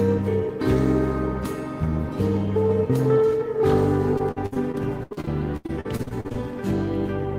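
From 4.17 to 6.37 s the stream suffers repeated packet loss: chunks of audio keep arriving late or not at all, and each hole, up to 78 ms long, is bridged by extending the preceding sound. About a quarter of that stretch is patched this way, so the audio turns choppy and robotic.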